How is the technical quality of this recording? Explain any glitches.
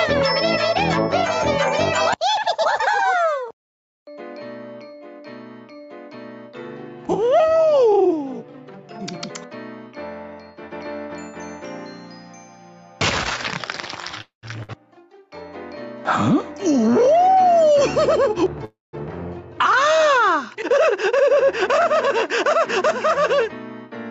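The recording has noticeable faults: level pumping throughout, two stalls, a short dropout and two stretches that run fast. It also carries nothing above 8 kHz, which fits a call codec's bandwidth.

Gain pumping runs through the whole clip. The level swings by about 5 dB. The likely cause is input gain set far too high, with a fast limiter clamping it back on each peak. Loud and soft passages end up squashed toward one level. On a waveform the envelope looks flattened.

A call audio freeze occurs from 14.21 to 14.45 s and again from 18.65 to 18.95 s. The likely cause is packets held up in transit so that the jitter buffer ran dry. The receiver stretched the last sound into a decaying buzz or hiss, then silence: about 130 ms of it in the first freeze and 180 ms in the second. The audio then resumes where it stopped, with nothing lost but a 214 ms and a 283 ms pause inserted. A spectrogram shows the last spectral slice smeared sideways and fading to blank.

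A burst of packet loss hits at 14.63–14.70 s, just after the first freeze. Roughly 60 ms of audio went missing. The receiver filled a 55 ms gap by extending the preceding sound and turning it down, so a fading buzz or hiss appears before playback jumps ahead. On a spectrogram there is a short, repetitive, dimming band followed by an abrupt discontinuity.

Jitter buffer speed-up occurs at 16.30–18.46 s, at 108% speed, and at 20.93–22.09 s, at 106%. With the buffer holding more audio than its target, the receiver trimmed pitch-period-sized slivers repeatedly to shrink its backlog. It removed about a fifth of a second in the first stretch and around 70 ms in the second. The pitch stays put, but the sound feels hurried and rhythm tightens. A waveform shows no gaps, only a subtly compressed timeline.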